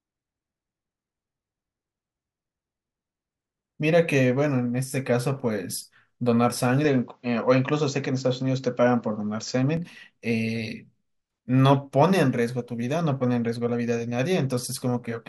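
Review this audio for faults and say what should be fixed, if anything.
From 6.85 to 9.77 s the speech turns duller and boxier, with nothing above 7.6 kHz, then opens out again. The likely cause is an input switched to a poorer device mid-recording, since the change brings its own tone and a faint new background noise well below the speech. A plain filter or codec bandwidth drop would narrow the band without adding that noise floor. The level stays about the same, and there is no gap at either switch. To prevent it, lock the recording to one fixed input device and disable automatic switching to headsets or call profiles.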